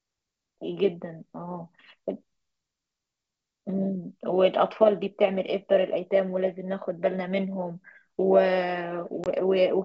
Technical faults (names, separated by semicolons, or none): packet loss on an ADPCM call